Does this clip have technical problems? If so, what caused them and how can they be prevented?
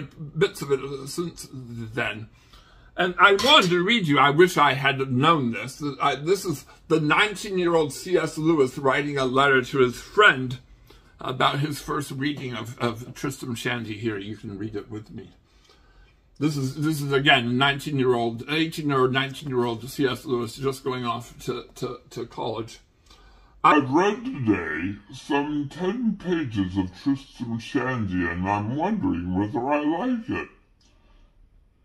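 Yes. From 23.72 s to the end, the clip has a section at the wrong speed: it plays at 0.764 times its original rate, so everything slows and drops in pitch together, by roughly five semitones, turning the sound deep and sluggish. Because speed and pitch move as one, this points to a resampling or clock mismatch, likely an editor or player treating that segment as if it had a different sample rate. To prevent it, confirm that every segment's sample rate matches the project or playback rate before export, and spot-check transitions by ear.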